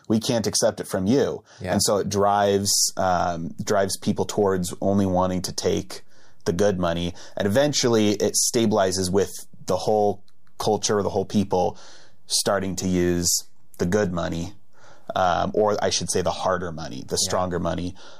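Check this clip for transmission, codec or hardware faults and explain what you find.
One fault is present. At 2.65 s a DC step shifts the waveform's zero line by about -37 dBFS and holds to the end, giving a single low thump while the speech continues.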